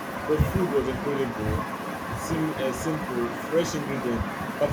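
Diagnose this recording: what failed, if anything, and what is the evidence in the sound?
Echo leak, in the call processing stage. From 1.66 to 2.28 s, a faint copy of the speech trails it by about 450 ms, roughly 15 dB quieter. The far end was likely on a loudspeaker, and its echo canceller let this stretch slip back.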